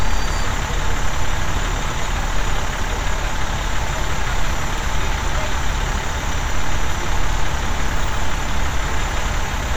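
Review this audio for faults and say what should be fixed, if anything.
Overlapping chunks: each 2.5 s block starts 50 ms before the previous one ends, so that slice replays as a stutter at 2.23–2.28, 4.78–4.83 and 7.33–7.38 s. Fix it by making each chunk begin exactly where the last one stopped, or by trimming the shared overlap before joining.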